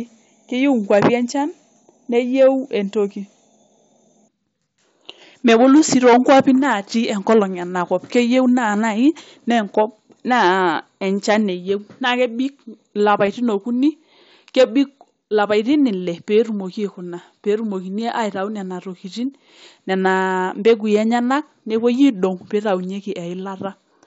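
At about 13.26 s there's a tiny concealed Bluetooth headset packet loss, roughly 15 ms of audio gone between headset and phone, which fits a couple of dropped frames. The receiver filled the gap by repeating the closest-matching chunk of the waveform it had just received, so you mostly get a buzzy smear held at full level and a slight wobble as the real signal picks back up. The mSBC wideband link carries the speech up to 8 kHz with only light grain.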